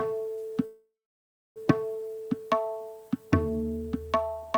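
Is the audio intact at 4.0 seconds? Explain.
Yes, the audio is intact at 4.0 seconds, with nothing broken or disrupted at that point.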